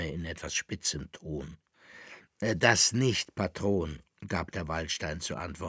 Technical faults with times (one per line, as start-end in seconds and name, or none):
none